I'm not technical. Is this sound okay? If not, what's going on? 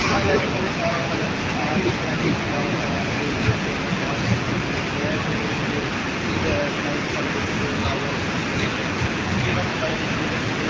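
No. From 1.2 to 1.28 s there is a brief, quieter repeat of the speech, arriving about 0.84 s after the original. This is an echo leak: the other side was likely on a loudspeaker, and their phone failed to fully remove its own playback.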